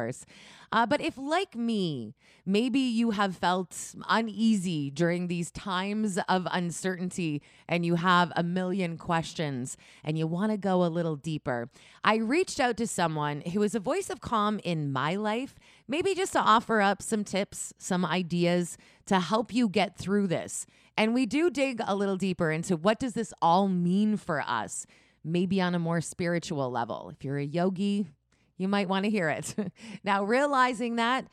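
Nothing goes wrong anywhere in this stretch of speech, so there's no technical fault to point to at any moment.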